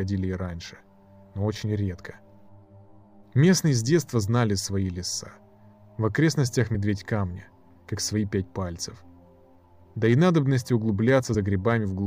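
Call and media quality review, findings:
Compressed frames skipped at 6.74 s (about one frame) and 11.33 s (about two), with 23.2 ms frames. Lost decoder frames cause forward jumps, not silent gaps.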